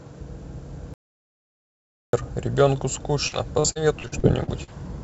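At 0.94 s the audio drops out to silence, with no room tone, until 2.13 s. About 1.19 s is lost, likely from a disconnected input or failed link. From 3.28 s to 4.70 s, repeated packet loss makes the sound choppy and robotic. There are eight gaps, the longest 44 ms, and each is patched by extending the previous sound, so about a fifth of that stretch is concealed. Throughout, nothing is heard above 8 kHz, which fits a G.722 call path.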